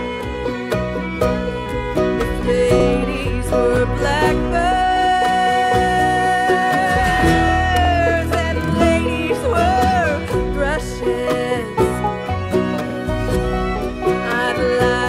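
Short stutters at 2.80, 7.85 and 12.90 s, each repeating 50 ms of sound, point to overlapping chunks, where every 5 s chunk starts before the previous one ends.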